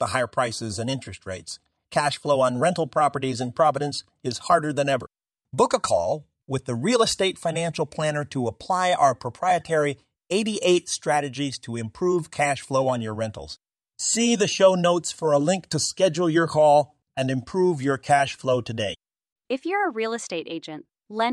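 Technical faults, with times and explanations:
No technical faults are audible anywhere in this speech recording.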